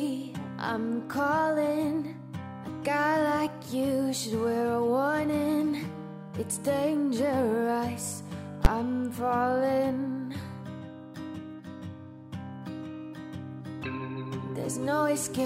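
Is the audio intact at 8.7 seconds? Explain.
No. At 8.65 s, invalid numbers at full scale: a calculation went infinite and the output pinned to full scale for about 12 ms, which fits a 512-sample block, so it is heard as a single loud bang.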